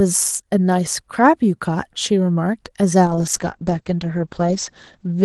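Up to about 3.06 s the speech comes through the Opus call path at around 32 kbps with audio reaching about 12 kHz. At 3.06 s a call bitrate drop hits: the encoder gets squeezed down to 10 kbps and stays there for roughly the last 2.15 s, right to the end. With so few bits Opus codes everything more coarsely and pulls the top end down to about 8 kHz, so the speech goes duller and rough and watery.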